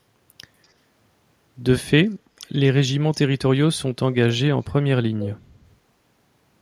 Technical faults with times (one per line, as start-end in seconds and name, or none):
4.67-4.72 echo leak
5.20-5.27 echo leak